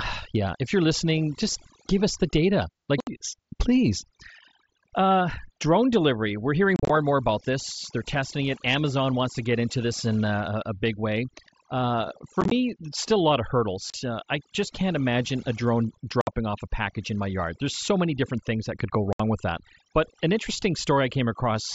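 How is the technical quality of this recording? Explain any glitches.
The recording has two problems: heavy noise reduction throughout, and six brief dropouts from the Bluetooth link.

Overdone noise removal runs for the whole clip. The noise reduction is set too aggressively, so frequency bands near its noise estimate are cut hard, taking quieter parts of the voice with them. The background falls to near silence dotted with twinkling specks.

Unconcealed Bluetooth headset packet loss happens when audio packets between headset and phone fail to arrive and silence fills the gap, with nothing to smooth it over. It cuts abrupt holes at 3.00 to 3.07 s; at 6.76 to 6.90 s, where about 98 ms of scattered gaps chop the sound; at 12.41 to 12.52 s, just before "still a lot of"; at 13.90 to 13.94 s; at 16.21 to 16.27 s, between "can't imagine a drone" and "off a package in"; and at 19.13 to 19.20 s, between "things that could go" and "with that". 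The audio lost in each event totals 38 to 98 ms, and these totals fit lost packets of about 7.5 ms each. Their hard edges can click. The mSBC wideband headset codec carrying the call adds only light graininess.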